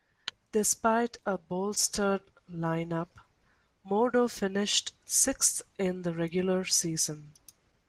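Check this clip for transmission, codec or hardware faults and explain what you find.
I found no faults in this clip.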